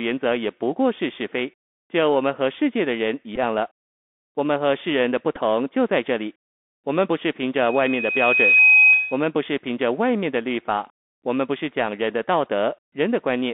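Throughout, the speech carries the sound of a Bluetooth CVSD headset codec at 64 kbps. Its one-bit delta coding leaves plainly audible granular hiss and scratchy sibilants, with the band confined to roughly 250 Hz to 3.6 kHz, so everything above sounds cut off.

At 3.36 to 3.38 s and again at 5.36 to 5.40 s come Bluetooth headset packet repeats. After losses of 11.2 ms and 7.5 ms, the decoder replays the last packet's bits, which fits about three and two missing packets. Each gap turns into a brief buzzy stutter at the 3.75 ms packet rhythm, close to 267 Hz.

From 7.59 to 9.26 s a loudspeaker feedback squeal rises. The microphone-to-speaker loop exceeds unity gain at 2.5 kHz, so that single tone swells over about a second to sit roughly 5 dB above the speech, then stops.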